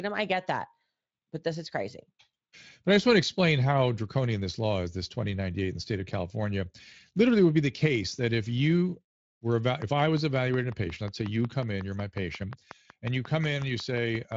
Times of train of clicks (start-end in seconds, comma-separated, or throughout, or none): 9.82-14.33